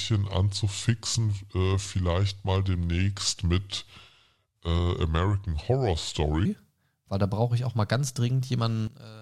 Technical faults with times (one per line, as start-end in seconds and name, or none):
0.00-6.45 section at the wrong speed
8.87-9.22 one channel inverted